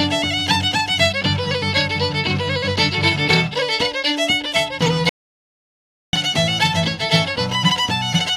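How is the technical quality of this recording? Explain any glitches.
One glitch stands out, an audio dropout to silence from 5.09 to 6.13 s. The sound cuts off mid-flow and returns about 1.04 s later, with no room tone in the gap, so that stretch is lost. The input was likely interrupted by a disconnected device, failed link or stray mute while recording continued writing silence.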